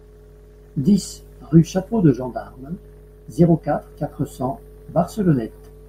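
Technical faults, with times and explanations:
Nothing in the speech stood out as a technical problem on listening.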